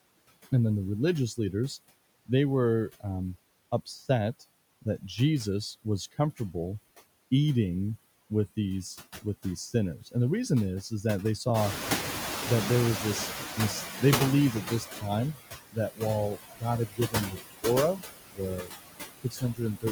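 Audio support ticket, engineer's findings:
Noise suppressor artifacts, whole clip: suppressor pulling residual background down by about 17 dB, gain decided per band, per frame. Result: noise dips in pauses and swells back under speech.

Noise suppressor catching up, 11.54 to 14.94 s: room noise jumps about 14 dB near 11.5 s and settles about 8 dB below speech. The suppressor's noise estimate is stale, so the new noise leaks through under-reduced. The estimate adapts over 3.4 s, reaching about 13 dB of reduction, and the background audibly sinks across that stretch.

Speech cut by the noise suppressor, four spots: 14.53 to 15.36 s, 15.7 to 16.02 s, 16.35 to 18.74 s, 19.24 to 19.85 s. Probable cause is the suppressor misclassifying speech energy as noise. Brief dips of about 11 dB first, then about 21 to 22 dB. Speech is swallowed, roughly a second in total across the 16.35 to 18.74 s span.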